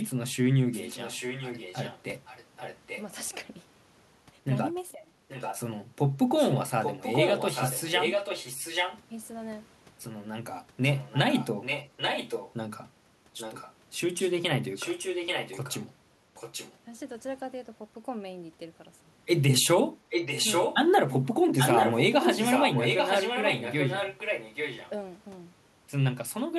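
A delayed copy of the speech returns about 0.84 s late, at 0.72–3.03, 5.28–5.6, 6.37–9.0, 10.82–12.54, 13.37–15.81, 16.35–16.76, 20.09–20.76 and 21.58–24.9 s. This is echo leak, likely from a far-end echo canceller missing loudspeaker pickup. It ranges from faint to as loud as the speech.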